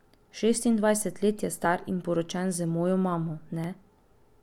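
A speech clip with two brief skips at 1.65 s and 3.64 s, roughly 2 s apart, each losing about 15 ms with no silence in between, likely audio missing between chunks rather than a silent dropout.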